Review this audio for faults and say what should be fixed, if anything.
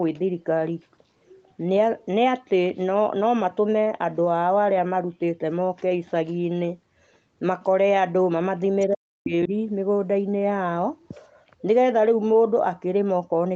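From 8.87 to 9.52 s, the echo canceller likely misread a moment of double talk, treating the near-end talker as loudspeaker echo and suppressing both. The result is speech suppressed in double talk: the voice dips sharply, by about 40 dB at its deepest, with roughly 0.4 s of the span affected. The call's microphone processing leaves no content above 8 kHz, which is expected band-limiting. Prevention would need better double-talk detection, so the canceller holds its adaptation and eases off suppression when both sides speak at once.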